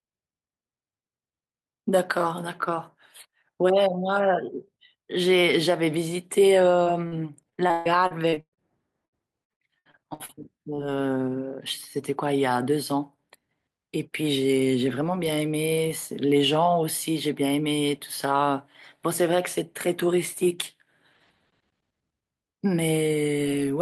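At 6.83 to 6.88 s and 7.08 to 7.14 s, short concealed packet loss: roughly 20 ms and 40 ms of audio arrived too late, and the receiver extended the preceding speech to cover each hole, leaving brief smears or wobbles. From 7.50 to 8.59 s and 9.05 to 10.80 s, repeated packet loss (robotic sound): a quick run of holes, up to 137 ms and 71 ms long, each patched in turn, produces choppy speech with pieces missing. About 40% of the first span and 23% of the second are filled-in sound.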